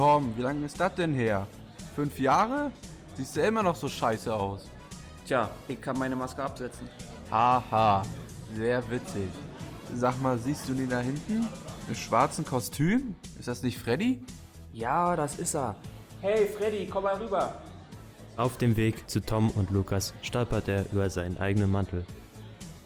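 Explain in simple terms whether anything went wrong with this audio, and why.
Nothing went wrong here: no dropouts, glitches, distortion or timing faults are audible anywhere in the recording.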